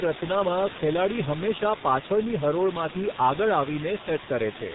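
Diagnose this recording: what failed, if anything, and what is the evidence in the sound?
Throughout the speech the sound is muffled and hoarse, with consonants smeared and nothing above 4 kHz. The fault sits at the codec stage: heavy G.723.1 coding at 6.3 kbit/s, whose 30 ms frames and slowly updated voice model discard detail and fine articulation.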